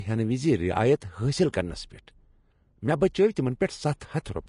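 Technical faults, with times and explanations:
Throughout, Vorbis compression: nothing reaches above 10.5 kHz, and the remaining treble is plainly hissy and grainy, its fine detail replaced by noise of similar energy. The sound likely comes from Vorbis at a low setting, which fits roughly 35 kbps.
1.00 s, 1.52 s and 4.00 s, pre-echo: a short hiss, about 11 to 13 ms long, comes just before each sharp attack. The codec spreads noise sized for the loud onset across its whole block, filling the quiet gap ahead and softening each attack.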